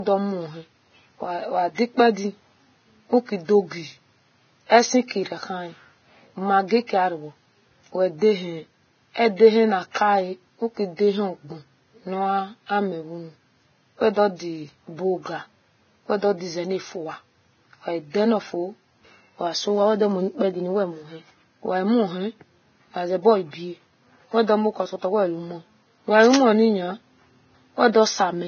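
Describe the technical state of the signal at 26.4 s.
A dense, uneven rustling and scratching sits over the speech from 26.22 to 26.43 s, nearly as loud as the speech itself. This is cable scratch noise, likely from a worn cable, connector or control being moved, its contact resistance jumping rapidly and injecting bursts of noise.

The speech at that moment is also dull and band-limited, with nothing above 6.6 kHz and the smeary artefacts of heavy compression. This fits low-bitrate audio saved at a high bitrate: the sound points to a likely earlier low-bitrate encode whose losses a later high-bitrate MP3 carries over unchanged.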